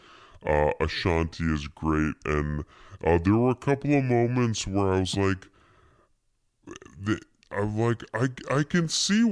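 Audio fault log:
Throughout, wrong sample rate: the speech runs at 0.69 times normal speed and sits about 6.5 semitones low, which fits 32 kHz material played back at 22 kHz. Unlike a pitch shift or time-stretch, pitch and tempo fall together, so everything sounds slowed and darkened.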